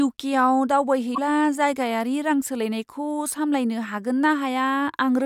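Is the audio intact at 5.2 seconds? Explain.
Yes, the speech at 5.2 seconds plays through intact, with no audible fault at that moment.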